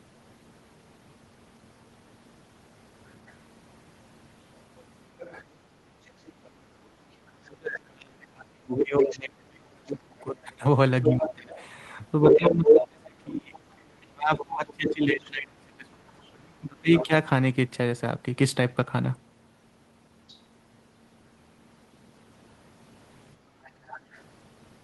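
From 5.19 to 7.31 s a faint second voice sits underneath, roughly 25 dB below the main speech. This is the other side's voice leaking through: the far end plays on the talker's loudspeaker, and the echo canceller likely failed to strip all of it from the microphone. It returns more strongly from 9.11 to 15.3 s, now louder than the talker by about 5 dB. It then appears as brief scraps at 16.96 to 17.06 s (about 10 dB down) and 20.28 to 20.34 s (barely audible, about 30 dB down). A last stretch at 23.64 to 24.23 s sits about 20 dB below the speech.

Overlapping that louder leak, from 7.36 to 17.11 s, the talker's own speech repeatedly sinks and breaks up, losing up to about 30 dB at its deepest, for around seven seconds in total. This is speech suppressed in double talk. With both sides talking at once, the canceller could not tell the talker from the loudspeaker echo and likely turned everything down together.

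From 23.37 to 23.62 s the room sound briefly ducks by about 7 dB, affecting roughly 300 ms, and then comes back. This is background gated by the echo canceller: while the loudspeaker was active, the canceller clamped the microphone hard and released it once the playback eased, just before the final leak begins.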